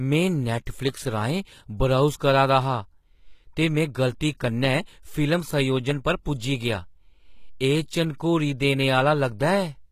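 HE-AAC compression throughout: the treble above the coded band is rebuilt from copied lower bands, so sibilants sound gritty and lispy, with nothing above 14.9 kHz. This is likely a very low bitrate, which fits about 20 kbps. Pre-echo at 0.66 s: the codec's block-wide quantisation noise leaks ahead of a sharp attack, leaving a 10 ms hiss before it and a softened onset.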